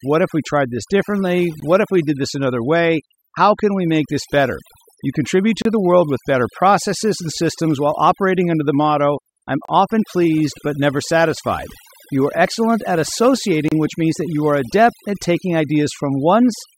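Overdone noise removal runs through the whole speech clip. The noise reduction was set far too aggressively, so every frequency band that drifted close to its noise estimate was pulled down hard or shut off entirely, taking the softer parts of the voice along with the hiss. What remains is a background of near silence dotted with twinkling specks.

A gap at a join of encoded pieces first appears at 1.60 s as a silence of about 19 ms. The same dropout returns every 4.0 s, now 32 ms long: at 5.62 s, just before "the world with better"; at 9.65 s, between "under the motto I'm" and "often pleased but never"; and at 13.68 s, just before "which means that you". Each piece was encoded on its own and spliced without trimming, leaving the encoder's start-up delay and final-frame padding in place. The sound stops abruptly, with edges smeared by the codec, then resumes exactly where it left off.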